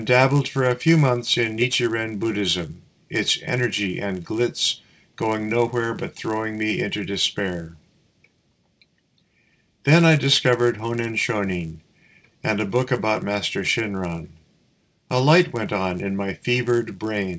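Throughout the clip, a buzz rides on the sound at 100 Hz, present only while there is signal and gone in the gaps. This is a resampler restarted on every block: the conversion from 48 kHz down to 16 kHz was done on 10 ms blocks in isolation, so each block edge lacked its true neighbouring samples and picked up a small error. Those errors repeat every 10 ms, fusing into a steady buzz rather than separate ticks.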